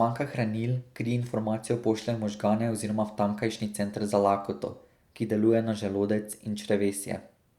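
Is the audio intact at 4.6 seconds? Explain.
Yes, the audio is intact at 4.6 seconds, with no dropout, glitch or other technical fault heard at that moment.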